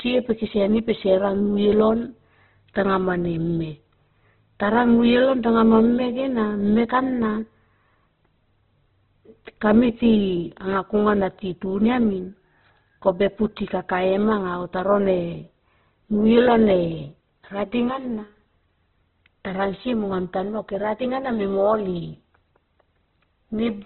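Throughout the speech, nothing is heard above 4.2 kHz, so the sound is narrow and dull. Tones turn grainy, rough and noisy rather than swirling. The cause is likely Opus compression in its music mode, starved of bits, which fits a rate near 12 kbps.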